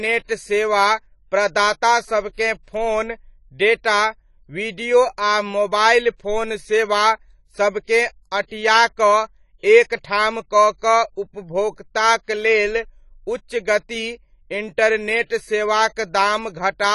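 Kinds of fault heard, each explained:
AAC compression: The speech sounds dull, with plainly audible coding damage and nothing above 11.5 kHz. A spectrogram shows a flat ceiling across the whole clip. This is likely lossy AAC-LC coding, where a bitrate around 32 kbps forces the encoder to discard high frequencies.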